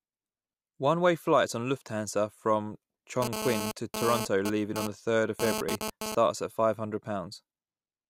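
A nearby 2G phone sending data transmits in bursts 217 times a second, and the audio circuitry rectifies those radio pulses. From 3.22 to 6.15 s this produces GSM phone buzz: a hard, raspy, harmonic-rich 217 Hz drone about 4 dB below the speech, intermittent and unrelated to it.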